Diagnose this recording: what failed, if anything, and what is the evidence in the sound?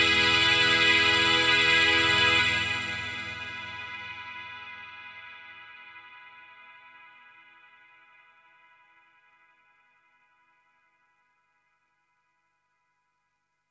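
Nothing failed in this recording of sounds. None of the stages, from the analogue wiring and converter through to storage and playback, leaves any audible evidence of a problem.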